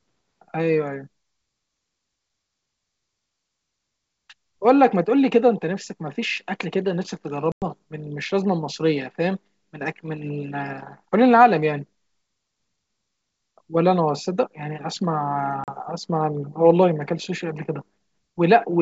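At 7.52 s the speech drops out for about 100 ms, a handful of lost packets on this ADPCM call, and a shorter 40 ms gap follows at 15.64 s. Each is a hard-edged hole: the waveform falls straight to silence and the spectrogram shows a clean vertical blank across the band. Because the decoder's predictor and step size have drifted from the sender's, the sound comes back slightly distorted and settles within tens of milliseconds.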